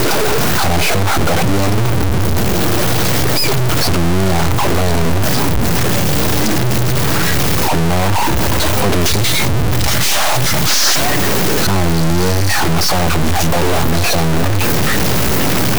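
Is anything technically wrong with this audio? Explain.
Yes. A stuck bit runs through the whole clip. The speech carries a harsh, buzzy distortion, and pauses fill with loud noise instead of silence. The likely cause is one data bit held fixed. That shifts about half the samples by a step of about -10 dBFS, and near-silent values flip sign noisily.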